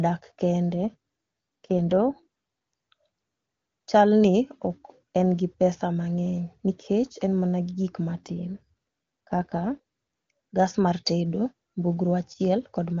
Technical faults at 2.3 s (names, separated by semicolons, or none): AMR rate drop